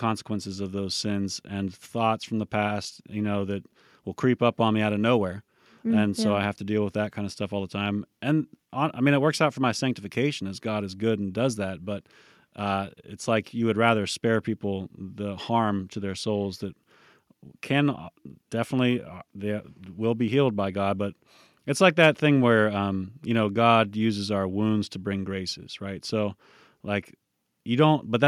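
No technical faults can be heard anywhere in it.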